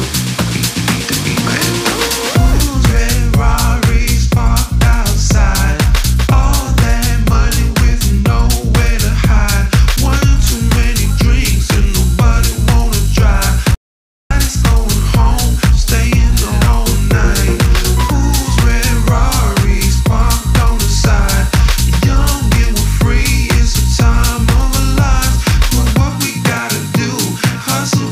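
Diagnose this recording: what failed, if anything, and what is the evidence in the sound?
Audio dropout to silence, 13.75 to 14.31 s. Sound cuts to silence, no room tone. Likely a lost input link while recording continued.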